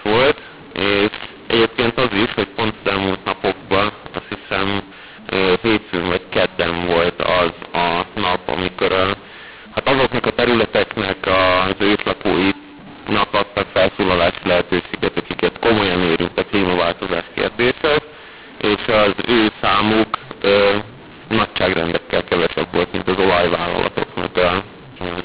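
Speech over a G.711 telephone path, with mu-law and A-law mixed up from start to finish: audio coded as A-law is decoded as mu-law, scrambling sample levels into harsh distortion, lifting the quietest samples so pauses fill with noise, and nothing above 4 kHz, consistent with 8 kHz telephone coding.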